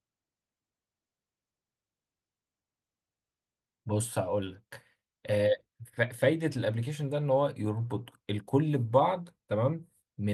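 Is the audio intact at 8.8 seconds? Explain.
Yes, the audio is intact at 8.8 seconds, with no fault at that moment.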